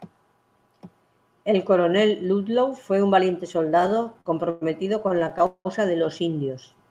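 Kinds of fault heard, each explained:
Repeated stalls (stutter): Late packets left the jitter buffer empty again and again. The receiver stretched the last sound to cover each wait. It happens from 3.81 to 4.63 s and 4.99 to 5.67 s. Pauses reach 191 ms. Nothing is lost, but the speech drags and stutters.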